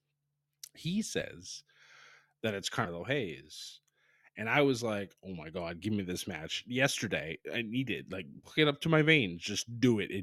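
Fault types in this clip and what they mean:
Compressed frames skipped: at 1.21 s, 2.85 s and 8.43 to 8.50 s, a few whole 20 ms frames of the encoded speech never reach the output, so about 70 ms of speech disappears each time and the sound lurches forward. A spectrogram shows a sudden discontinuity in the speech harmonics. The waveform shows an abrupt shape change with no flat gap.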